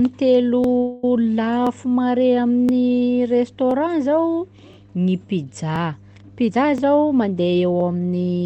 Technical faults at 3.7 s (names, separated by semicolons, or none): mains hum; overlapping chunks